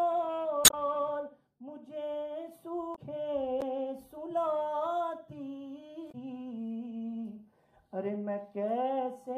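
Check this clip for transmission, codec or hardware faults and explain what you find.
One fault type appears three times: damaged data in a compressed stream, at 0.62 to 0.74 s, 2.92 to 2.99 s, and 6.08 to 6.15 s. Corrupted bytes make the decoder misread frames and hunt for sync. Each spot is a brief chirp, squawk, click or short hole.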